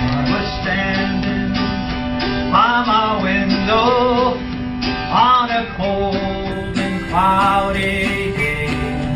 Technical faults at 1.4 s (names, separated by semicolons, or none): none